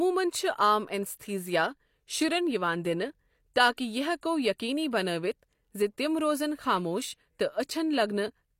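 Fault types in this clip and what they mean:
pre-echo: The codec spreads noise across a whole block, so a short hiss precedes a sharp attack. Here it's heard at 3.76 to 3.78 s and 4.21 s.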